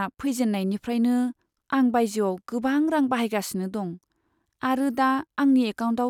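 No technical faults detected.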